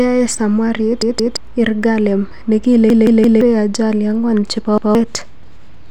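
Repeated buffer stutters at 1.02–1.37 s, 2.90–3.41 s and 4.78–4.95 s. Audio arrived late, so the device replayed one 171 ms block two, three and one extra times. Waveform and spectrogram show identical tiled segments with hard vertical seams.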